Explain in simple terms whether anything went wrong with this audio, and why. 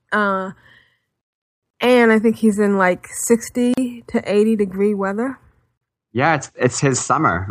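A gap at a join of encoded pieces appears three times, at 1.71 to 1.74 s (just before "and I think he's"), 3.74 to 3.78 s, and 5.78 to 5.81 s (right after "degree weather"). Each is a brief silence of about 33 to 38 ms, about every 2 seconds. The audio seems to have been compressed in separate chunks and stitched together. Each chunk kept its built-in bit of silence at the edges, so the speech briefly drops out and then carries on.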